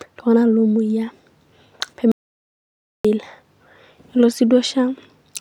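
Audio dropout to silence, 2.12 to 3.05 s: speech halts into total silence without room tone, likely because the input was lost while recording continued.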